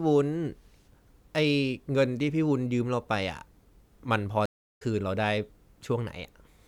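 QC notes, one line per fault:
4.46–4.82 s, stream reconnect: the speech drops out into about 325 ms of silence and resumes roughly 0.3 s further on, so a short stretch of the speech is skipped. The skip points to the connection breaking and the player reconnecting mid-stream. A fresh decoder then starts from the server's current position rather than from where playback stopped, leaving a silent gap followed by a jump ahead.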